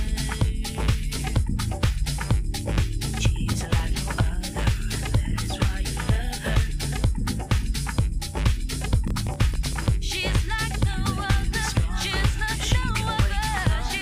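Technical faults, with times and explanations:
9.08–9.83 s, processor overload crackle: a gritty burst of crackle as about fifteen short buffers, roughly 1.5 ms each, miss their deadline, each leaving a tiny silent gap.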